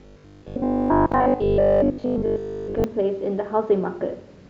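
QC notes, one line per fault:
0.02–2.84 s, robotic sound from repeated short buffers: rigid metallic 50 Hz buzz, likely 20 ms chunks looping in place of most audio; spectrogram shows 50 Hz-spaced harmonic lines, waveform identical repeating cycles.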